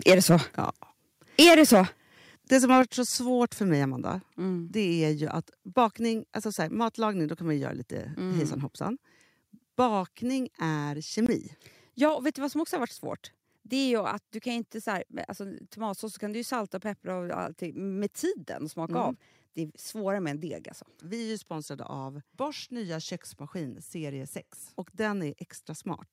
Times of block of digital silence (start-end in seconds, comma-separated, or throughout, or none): 11.26-11.29